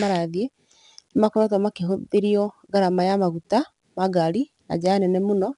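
A gritty hiss rides on the speech from start to finish, growing louder and quieter with the talker's level, and the top end stops near 10.7 kHz. This is 4-bit ADPCM compression. Each sample is coded as a coarse 4-bit step away from a predicted value, so the rounding error becomes broadband noise that tracks the signal. The band limit fits a sample rate around 22 kHz, which suggests a stream near 89 kbps.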